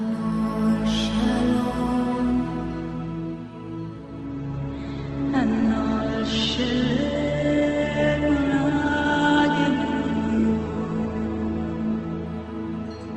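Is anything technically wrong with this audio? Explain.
Yes. From 4.26 s to 12.26 s the adaptive stream switched to a lower bitrate, probably because the connection slowed. The treble abruptly vanishes above about 8.1 kHz and codec smearing rises with no gap, which fits Opus dropping from 64 to 12 kbit/s.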